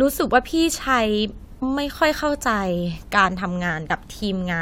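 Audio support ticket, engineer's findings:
Damaged data in a compressed stream, two points in the speech. Component: compressed payload, corrupt bytes in transit or storage. Mechanism: decoder misreads the bad frame, loses sync, hunts for the next valid frame header. Symptom: short glitch at 1.61 s, under 20 ms. Same fault recurs at 3.87–3.90 s, about 36 ms, a longer glitch.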